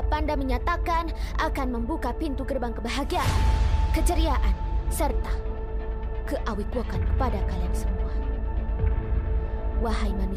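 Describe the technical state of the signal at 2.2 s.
At 2.2 s the signal is intact, with no dropout, clipping, distortion or other fault to be heard at that point.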